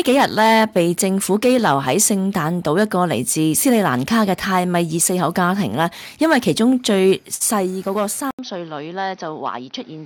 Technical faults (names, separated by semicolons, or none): input switched to a poorer device